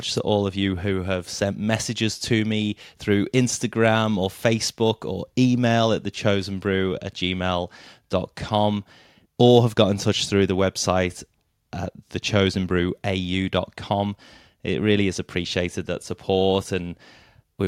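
No audible technical faults.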